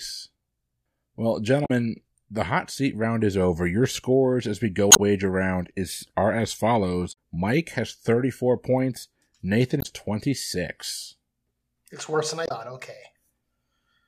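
Five short glitches from damaged data in the compressed stream, at 1.62–1.71 s (just before "the hot seat round"), 4.89–4.99 s, 7.09–7.16 s (after "round is are as"), 9.78–9.86 s and 12.43–12.51 s (after "worse than"). Each time, the decoder hits corrupted frames, loses sync and hunts for the next good one, so you get a quick glitch.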